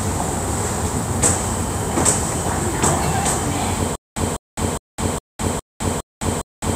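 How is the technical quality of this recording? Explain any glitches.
The recording has one clear glitch, a stutter with silent gaps. From 3.96 s to the end, a 201 ms burst of sound repeats seven times. Each repeat is followed by about 209 ms of digital silence, so it returns every 410 ms. The likely cause is a stalled stream that replays its last fragment on each retry and then runs empty. The audio that belonged in that stretch is lost.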